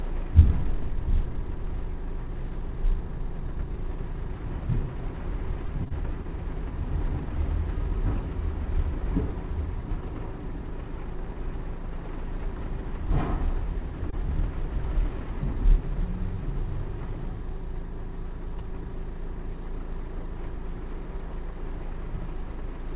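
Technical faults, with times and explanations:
5.66 to 6.26 s, repeated packet loss (robotic sound): four gaps, the longest 23 ms, each patched by extending the previous sound. The repeated patches make this stretch choppy, with pieces missing.
14.10 to 14.14 s, short concealed packet loss: a 20 ms hole was filled by continuing the preceding sound, then blended back. It is heard as a brief smear or wobble.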